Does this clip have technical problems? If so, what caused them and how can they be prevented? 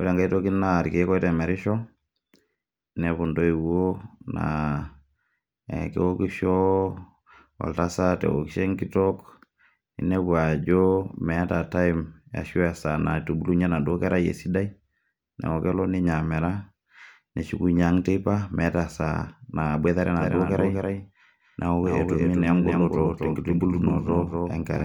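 Yes. From 20.19 s to the end of the speech, a doubled audio track appears, likely because a second, slower capture path was mixed in alongside the main one. That lays a full-band copy of the speech roughly 300 ms behind the original and a few decibels quieter. The copy switches on abruptly, with no decay or room colour, so each syllable gets a dry, detached repeat. To prevent it, make sure only one capture path feeds the mix.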